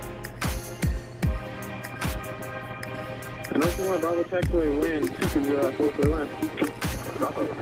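Nothing is technically wrong with this clip.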